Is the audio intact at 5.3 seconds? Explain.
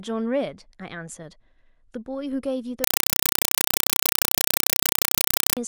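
No. From 2.84 to 5.57 s, compressed stream played as audio: undecoded Dolby Digital data replaces the speech as loud chattering static, with 4 ms noise bursts 31.25 times a second. The spectrogram shows evenly spaced broadband vertical bars, and the waveform shows dense blocks separated by flat silence.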